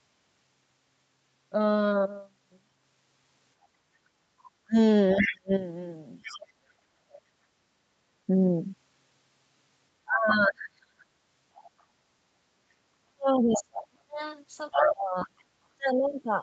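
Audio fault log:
3.83–4.2 s, background gated by the echo canceller: the room sound dips by about 6 dB for roughly a third of a second and returns.
4.65–7.34 s, 10.05–11.07 s, 13.07 s to the end, speech suppressed in double talk: the talker's own speech dips, up to about 35–40 dB, likely because the echo canceller mistook it for echo while both sides spoke.
5.17–6.36 s, 11.57–11.83 s, 13.53–15.44 s, other side's voice leaking through: a second voice is heard under the talker. It is about 5 dB down in the first stretch, faint at about 30 dB down in the second, and roughly level with the speech in the last. This is likely residual loudspeaker echo that the canceller missed, which adds a voice rather than removing sound.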